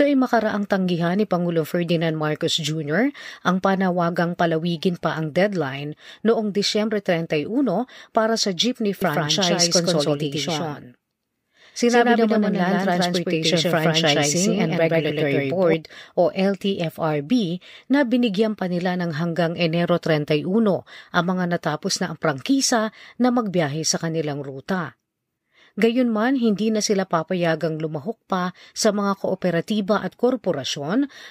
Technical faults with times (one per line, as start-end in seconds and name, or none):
9.02-15.74 doubled audio track